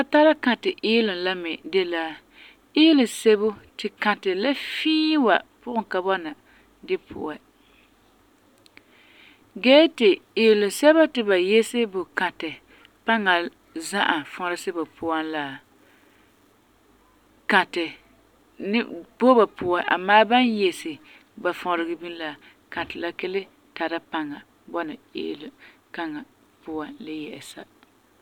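No technical faults are audible anywhere in the speech.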